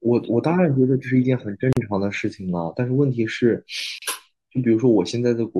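A short speech recording drops out twice: the sound drops out for 40 ms from 1.73 to 1.77 s, and again for about 36 ms from 3.98 to 4.02 s, each time resuming exactly where it left off, with softened edges. These are gaps at a join of encoded pieces: separately encoded segments were spliced without trimming, so each encoder's start-up delay and final-frame padding survive as silence at the seams.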